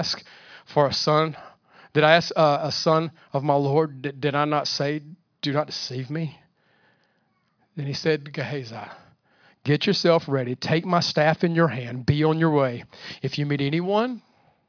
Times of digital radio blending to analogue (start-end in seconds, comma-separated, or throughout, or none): none